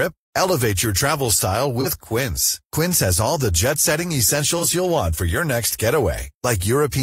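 At 1.80 to 1.87 s, just after "your travel style", and again at 4.57 to 4.64 s, between "all the jet setting" and "you'll want for your", there is AAC frame loss with concealment. Each gap of about 43 ms fits one lost frame, which the decoder covered by reusing the previous spectrum, so a brief smeared, phasey patch replaces the sound. Unlike a plain dropout, there is no hard silence or click.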